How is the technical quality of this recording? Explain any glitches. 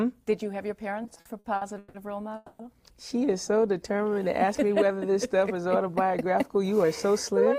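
The recording has four network playback faults, all timing problems in which the receiver filled or trimmed audio rather than losing it.

From 1.03 to 1.96 s there are repeated stalls (stutter). Packets kept arriving late, so the jitter buffer emptied nine times. The receiver filled 360 ms, up to 160 ms at once, and the audio drags and stutters.

From 2.36 to 2.61 s there is a call audio freeze. The last sound is held for 230 ms without dropping to silence, then the audio resumes where it stopped. The likely cause is packets held up in transit that emptied the jitter buffer.

From 3.92 to 4.29 s there is a jitter buffer slow-down. A low buffer made the receiver repeat short pitch periods, adding 70 ms, so the audio runs at 84% speed with unchanged pitch.

From 6.10 to 7.53 s there is a jitter buffer speed-up. An overfull buffer made the receiver cut tiny pieces, about 70 ms in total, so the audio plays at 105% speed, hurried but at the same pitch.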